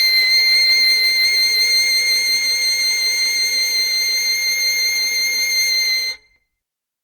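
From start to end, the music carries the smeared, swirling texture of generation loss. The highs have a hollow, watery quality. Transients lose their edges, so attacks sound blurred and soft. The damage is heavier than a single lossy pass would leave. The likely cause is repeated re-encoding, perhaps about four passes through a codec like Opus at around 64 kbit/s. Each pass lands on a fresh frame grid, so quantisation noise and spectral gaps accumulate. Content still reaches about 20.2 kHz.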